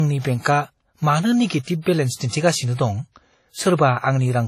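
Throughout, the speech mixes two distinct kinds of compression artefact and has nothing above 15.7 kHz, unlike a single codec's one signature. This is likely transcoding between lossy codecs.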